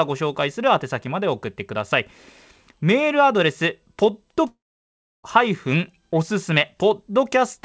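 From 4.48 to 5.26 s, likely a long network dropout: a brief fading buzz, then 0.67 s of flat waveform and blank spectrogram, with 0.76 s of speech lost.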